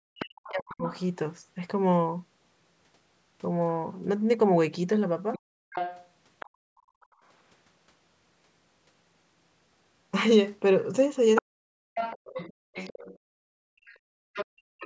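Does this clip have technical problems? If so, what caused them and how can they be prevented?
Yes. There are three kinds of fault.

Speech suppressed in double talk, from 0.0 to 0.85 s and from 11.41 to 12.76 s. When both ends talked at once, the echo canceller was likely unable to tell the local talker from the loudspeaker echo, so it turned everything down. In each stretch, about a second of the talker's speech sinks by roughly 40 dB at its deepest, dipping and breaking up. Prevention: use a canceller with proper double-talk detection, so that it keeps the near-end voice when both sides speak.

Other side's voice leaking through, from 0.2 to 1.01 s, from 5.33 to 7.06 s, and from 11.36 s to the end. The far end played over the loudspeaker, and the canceller likely left part of it in the microphone signal. A second voice can be heard under the talker, around 20 dB below the speech in the first stretch and only about 10 dB below in the later two. 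Prevention: use a headset, or improve the canceller's echo modelling and residual-echo suppression.

Background gated by the echo canceller, from 5.39 to 7.22 s and from 13.19 to 14.79 s. While the loudspeaker was active, the canceller clamped the microphone hard. The room tone drops by about 33 dB and then about 32 dB, for roughly a second and a second and a half, and returns when the canceller lets go. Prevention: use gentler suppression with comfort-noise fill, so that the room sound stays continuous.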